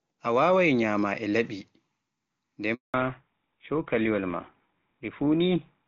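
At 2.74 s a handover gap cuts the speech: the call switched networks and no frames arrived, so the sound fades within a few tens of milliseconds and stays silent for 200 ms, until 2.94 s. The waveform shows a flat line, and the spectrogram a blank vertical band across all frequencies.

From 2.94 s to the end, the call shows a fallback to narrowband. The clear wideband sound before the gap, which fits a high-rate HD Voice link, gives way to what sounds like a GSM full-rate codec. Nothing remains above 4 kHz, so the speech turns duller and rougher. On a spectrogram the upper band is cut off sharply at 4 kHz from this point on.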